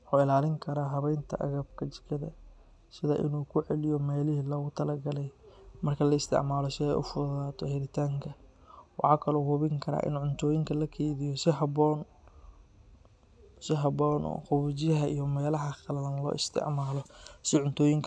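Nothing faulty can be heard anywhere in this speech recording. There is no event to time or explain.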